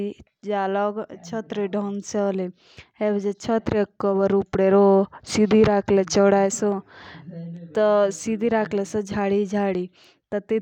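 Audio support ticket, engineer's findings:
Listened to the full speech clip; nothing stood out, no faults to log.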